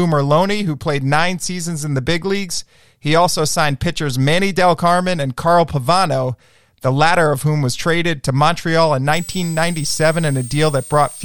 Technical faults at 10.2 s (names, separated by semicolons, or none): switching supply whistle